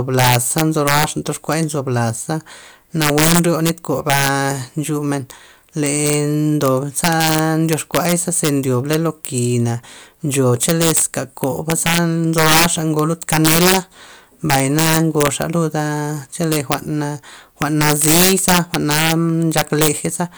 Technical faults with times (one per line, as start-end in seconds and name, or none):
0.00-20.38 integer overflow